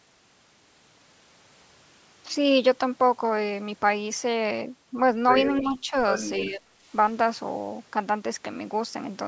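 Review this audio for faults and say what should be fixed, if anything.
An echo leak appears from 5.59 to 5.81 s: a faint delayed copy of the speech, roughly 20 dB below it and trailing by about 289 ms. It likely comes from a loudspeaker whose echo canceller left part of the pickup in the return path. Better loudspeaker-microphone isolation, or a longer echo-canceller tail, would prevent it.

Speech suppressed in double talk occurs at 5.61–5.93 s, a shallow dip of around 5 dB, and at 6.4–6.69 s, a deeper drop of roughly 20 dB. Both fall during double talk, so the likely cause is the canceller failing to separate near-end speech from echo and attenuating both. A canceller with better double-talk detection and gentler suppression would prevent it.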